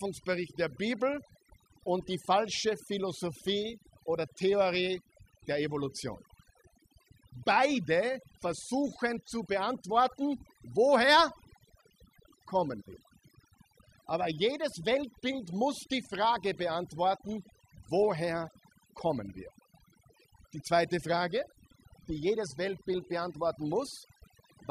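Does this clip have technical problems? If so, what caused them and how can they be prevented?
Yes. Overdone noise removal affects the whole speech clip: bands near the tool's noise estimate are pushed down, and quiet voice detail goes with them. Unlike codec artefacts, pauses drop to near silence with twinkling specks. A gentler reduction setting prevents it.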